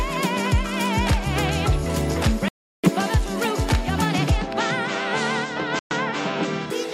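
The audio drops to silence twice and then resumes. The first gap starts at 2.48 s and lasts about 350 ms, ending at 2.90 s. The second starts at 5.79 s and lasts about 120 ms, ending at 5.92 s. The likely cause is a Bluetooth stall. Radio interference delays packets, so the headphones' buffer empties. Playback then halts until retransmitted packets arrive and refill it.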